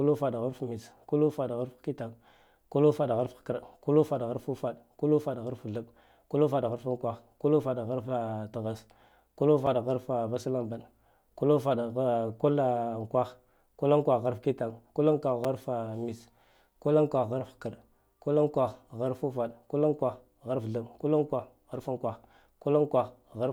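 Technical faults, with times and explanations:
9.66 s and 15.44 s, block of digital silence: brief dropouts of about 5 ms, the first just before "harfa vaslambaɗe ku lufaɗ" and fitting a 256-sample buffer. Each is heard as a click and shows as a flat near-silent stretch and a vertical spectrogram stripe.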